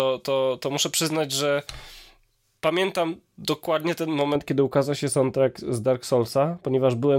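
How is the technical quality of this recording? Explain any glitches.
The recording has one clear technical fault, confined to its first part.

Pre-emphasis left on, from 0.0 to 4.36 s: the treble was boosted ahead of recording or transmission, fitting a J.17-style curve, but the complementary de-emphasis was never applied on playback. The speech is therefore tilted upward, with the highs at 10 kHz about 11 dB hotter relative to 1 kHz than they should be. It sounds thin, overly bright and sibilant until the boost stops at 4.36 s.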